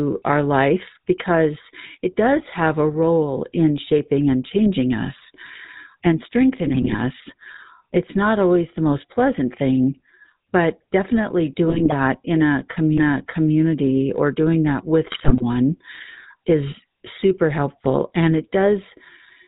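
GSM full-rate codec coding runs through the whole speech clip, and the damage is plainly audible: a buzzy, gravelly roughness and nothing above 4 kHz. The coder models the vocal tract and drives it with sparse, regularly spaced pulses, which fits the 13 kbps full-rate standard.

GSM bit errors strike from 6.66 to 6.95 s, from 11.68 to 11.93 s just after "pleasant thing but definitely", and from 15.12 to 15.43 s right after "or doing that with". Corrupted filter, pitch and gain values reach the decoder, so each burst breaks into squawks, pops and gargling.

A CD skip comes at 12.98 s, just before "or doing that with". The laser jumped to another turn of the spiral, so there is a very brief mute, and playback resumes from a different point on the disc.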